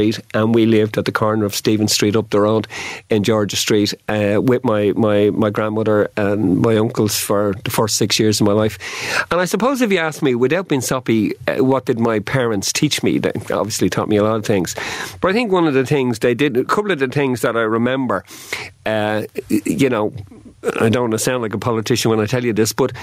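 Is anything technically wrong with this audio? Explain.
Yes. Gain pumping runs throughout the speech: the input gain is likely set far too high, so a fast limiter clamps down on every loud syllable. The level swings by around 20 dB, leaving everything squashed.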